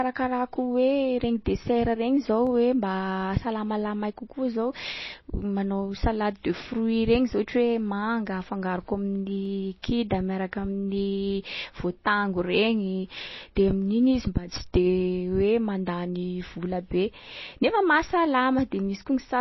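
Throughout, the speech sounds watery and swirly, likely from MP3 compression at a low bitrate around 24 kbps that starves weak frequency lines. At 2.47 s and 9.45 s, single sharp clicks are heard, likely dropped samples, where a fraction of a millisecond goes missing and the waveform jumps. At 13.55 s, pre-echo puts a brief hiss about 10 ms ahead of an attack, as block-wide quantisation noise fills the quiet gap before it.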